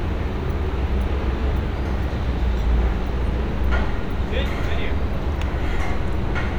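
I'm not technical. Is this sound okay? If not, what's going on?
Yes, nothing wrong here.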